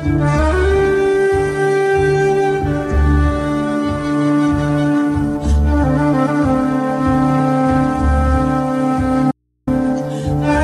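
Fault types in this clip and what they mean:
Audio dropout to a faint residue: the sound cuts out abruptly from 9.31 to 9.67 s, about 0.36 s, leaving only mains hum roughly 50 dB below the signal, likely from a briefly lost input while the path stayed live, unlike a pause or fade.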